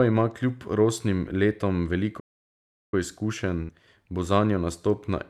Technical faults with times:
2.19-2.94 playback stall
3.62-3.71 burst of packet loss

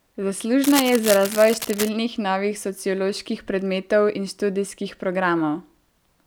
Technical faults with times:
0.63-1.89 cable scratch noise

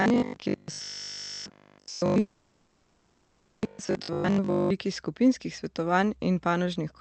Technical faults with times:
0.02-4.70 robotic sound from repeated short buffers
2.19-3.64 call audio freeze

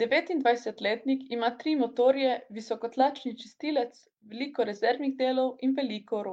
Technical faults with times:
none

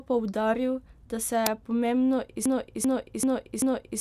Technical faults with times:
1.46 uninitialised buffer
2.46-4.01 broken-record loop

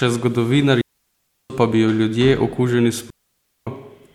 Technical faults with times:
0.81-1.50 digital wireless dropout
3.10-3.67 digital wireless dropout

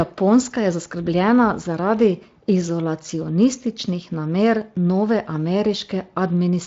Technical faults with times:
none

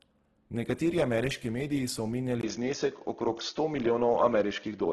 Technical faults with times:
0.00-4.92 Opus compression
2.41-4.92 input switched to a poorer device

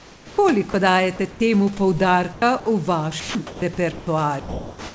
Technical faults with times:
0.00-0.38 comfort noise in place of the background
0.71-0.74 sound dropped by the voice detector
1.31-1.40 comfort noise in place of the background
2.33-2.66 sound chopped by the voice detector
3.20-4.07 sound chopped by the voice detector
4.40-4.94 sound dropped by the voice detector

